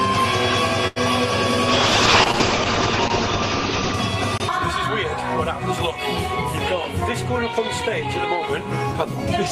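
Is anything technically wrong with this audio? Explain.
Yes, there are two faults.

From 0.87 to 0.98 s there is a short stall from a late packet. A packet arrived late, the jitter buffer emptied, and the receiver stretched the last bit of sound for about 86 ms until the packet turned up, then continued from the same point. Nothing is cut out, which is what separates it from a dropout or concealed loss. You hear one sound held too long with a faint buzz or dip, and everything after it lands slightly later.

From 1.69 to 4.00 s there is a call bitrate drop. The bandwidth estimate fell, and the encoder went from 32 to 8 kbps, staying at the lowest rate for about 2.2 s. With so few bits the coding becomes coarse, and the audio band narrows from 20 kHz to 8 kHz. Unlike a brief stall, this is a sustained change in quality: the sound turns rough, watery or muffled across the whole stretch, then clears as the rate recovers.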